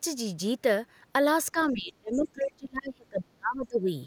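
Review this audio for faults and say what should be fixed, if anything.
Speech suppressed in double talk runs from 1.52 to 3.89 s. The speech dips, for about two seconds in total, at worst by roughly 30 dB. The echo canceller likely could not separate the talker from the loudspeaker echo, so it turned both down. Tuning the canceller to detect double talk and suppress less aggressively would prevent this.

The other side's voice leaking through appears at 1.58 to 1.74 s and at 2.12 to 2.22 s. Both are short, faint scraps, around 35 dB and 25 dB below the speech. Loudspeaker sound likely reached the microphone and the echo canceller left part of it in. Using a headset or a lower loudspeaker volume, with a better-adapted canceller, would prevent this.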